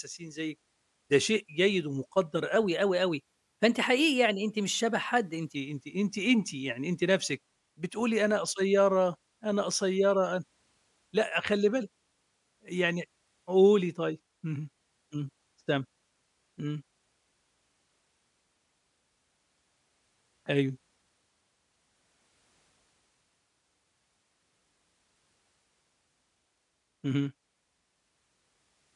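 Speech, and from 2.56 to 5.55 s it runs at the wrong sample rate: that stretch comes out about 9% faster and roughly 1.5 semitones higher, so the voice sounds a touch hurried and bright before snapping back. Speed and pitch rising together like that means the samples were played back faster than they were captured, with no rate conversion. A 1.09 ratio fits 22 kHz material being played at 24 kHz.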